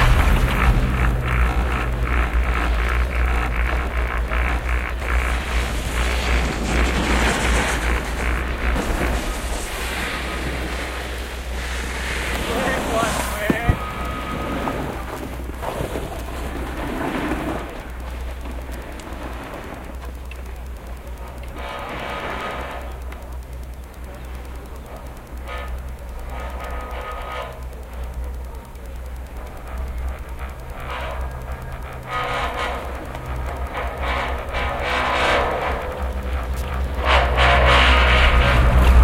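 Wi-Fi interference runs throughout. A nearby radio's beacon, every 102.4 ms, is rectified by the circuit. It ticks faintly, about 35 dB down, ten times a second.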